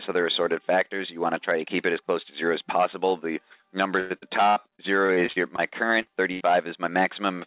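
From 4.0 to 5.6 s, repeated packet loss makes the sound choppy and robotic. Nine holes, the longest about 99 ms, are each patched by continuing the last sound, and together they fill about a fifth of the stretch. The quick recurrence is what sets it apart from a single dropout. At 6.02 to 6.08 s, a short concealed packet loss covers about 40 ms with a brief smear or wobble. It is too short to fade away, unlike a burst. From 6.32 to 6.42 s, a burst of packet loss holds the last sound for about 80 ms, turning it down as it goes. The audio then picks up further along, with the part in between missing. All of this rides on a call path whose sound stops at 4 kHz, which fits G.711 mu-law at 64 kbps.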